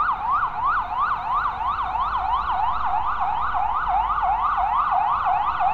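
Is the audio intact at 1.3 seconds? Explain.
Yes, at 1.3 seconds the audio is intact, with no dropout, distortion or other technical fault to be heard at that moment.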